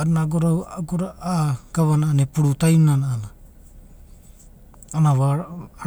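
Nothing technically wrong turns up anywhere in this bit of speech, so there's no problem to point to or explain.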